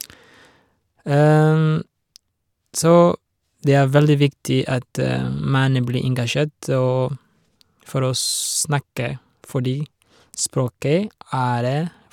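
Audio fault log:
No faults detected in this speech recording.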